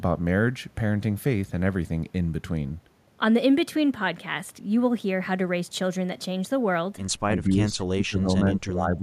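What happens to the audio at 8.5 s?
At 8.5 s the speech is inside a stretch of speech suppressed in double talk, running from 7.28 s to the end of the clip. The level sags unevenly, at its worst by roughly 20 dB, and parts thin out or drop away, about a second and a half affected in total. The likely cause is an echo canceller that, with both ends talking, could not tell the near talker from loudspeaker echo and attenuated everything.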